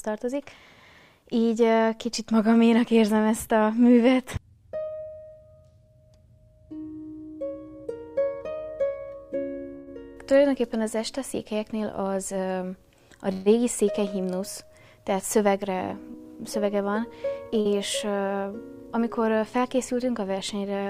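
The audio has three kinds of network fault. Two call audio freezes occur at 9.75 s and 13.32 s. Each stretches the last sound into a fading buzz for 115 ms and 138 ms, then resumes intact. The likely cause is delayed packets draining the jitter buffer. Jitter buffer speed-up runs from 15.63 to 17.39 s at 105% speed, trimming about a tenth of a second. It returns from 19.41 to 19.95 s at 106%, trimming some 40 ms. Pitch stays put but the pace feels rushed. A short concealed packet loss at 17.61 to 17.68 s leaves a brief smear. About 40 ms never arrived, and 42 ms of extrapolated sound covers it.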